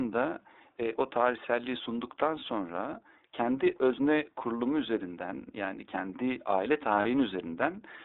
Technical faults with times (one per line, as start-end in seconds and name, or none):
0.00-8.05 iLBC codec
7.02-7.05 lost iLBC frames